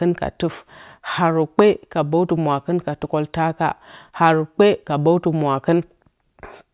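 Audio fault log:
No fault can be heard anywhere in the speech. Nothing in the recording calls for a timed entry.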